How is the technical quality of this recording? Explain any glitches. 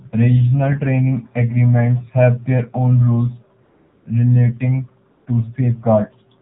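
The recording is clearly degraded by mobile-network processing. It carries telephone-band coding throughout, plus two brief gaps where the real background is replaced.

Throughout, the speech has the character of the AMR narrowband mobile codec. With 8 kHz sampling, nothing above 4 kHz survives, so the sound is dull and boxed-in. The low bit allocation, which fits the 7.4 kbit/s mode, makes the voice plainly buzzy and synthetic, because each frame is rebuilt from a vocal-tract model and a few excitation pulses.

AMR comfort noise appears from 3.64 to 4.06 s (about 420 ms) and again from 5.10 to 5.26 s (160 ms). The sender judged these stretches silent and stopped transmitting speech frames, so the receiver synthesised noise from a coarse level and spectrum description. What you hear is a smooth, steady hiss switching in and out in place of the genuine background.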